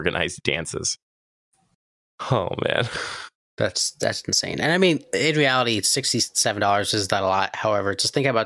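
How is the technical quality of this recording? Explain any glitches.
The recording has one clear problem: a wrong sample rate from 3.80 s to the end at 8.45 s. The samples are played back faster than they were captured, without conversion, a ratio that fits audio recorded at 22 kHz but played at 24 kHz. The speech runs about 1.09 times faster and sounds roughly 1.5 semitones higher, hurried and slightly chipmunk-like. Tempo and pitch rise together by the same ratio, which separates it from a pitch shift, where timing stays unchanged.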